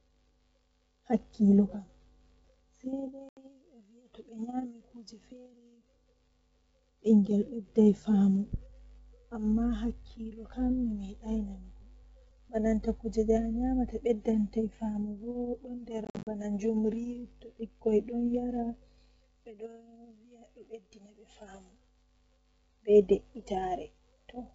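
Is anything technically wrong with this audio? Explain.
Yes. There is packet loss on an ADPCM call, carried over G.722 wideband coding, at 3.29 to 3.39 s (80 ms gone) and 16.05 to 16.28 s (150 ms lost in gaps up to 50 ms). The missing packets become abrupt silences. Afterward the receiver's adaptive predictor and step size no longer match the sender's, so speech resumes with brief distortion.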